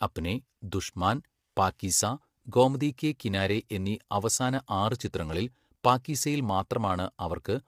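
Throughout the speech, the voice sounds rough and grainy, with noise between harmonics; the likely cause is low-delay AAC compression whose short frames fit roughly 32 kbps AAC-ELD.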